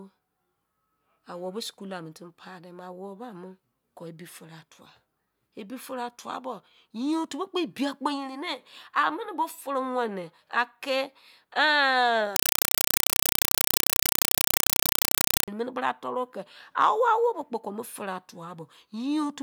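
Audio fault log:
12.36–15.48 s, compressed stream played as audio: an undecoded bitstream read as samples gives 4 ms noise bursts at 31.25 Hz, fitting AC-3. Loud chattering static replaces the speech.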